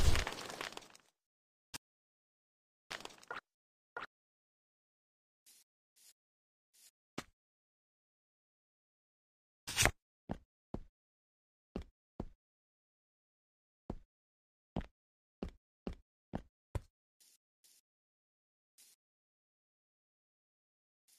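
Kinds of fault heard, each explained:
Audio dropout to silence: the input was likely lost briefly, so zeros were written, cutting the sound to total silence from 1.76 to 2.91 s.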